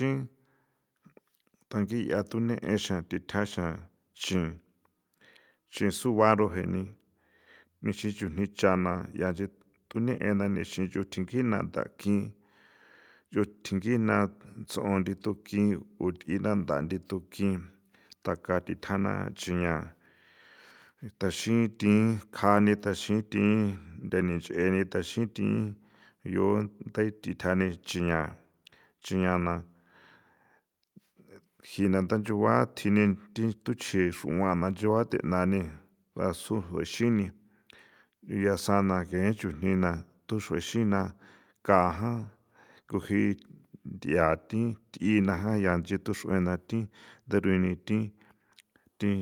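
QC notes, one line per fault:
No faults found in this clip.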